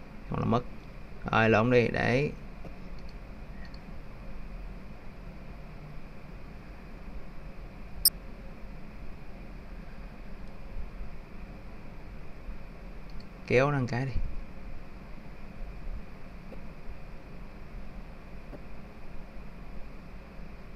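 Short chirpy noise bursts at 2.65–2.68, 8.05–8.08 (by far the loudest), 16.52–16.54 and 18.53–18.56 s are each a corrupt frame decoded: damaged compressed data played anyway, scattering energy to the wrong frequencies.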